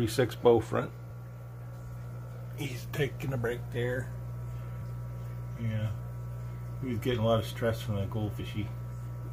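At 1.09 s, 4.81 s and 8.39 s there's a quick glitch, each one over in under 20 ms. That's damaged data in a compressed stream: bytes in the encoded stream got lost or overwritten, so the decoder misreads those frames, loses its place and has to hunt for the next valid frame header before it can carry on. You hear each stumble as a brief chirp, squawk, click or hole cutting into the sound.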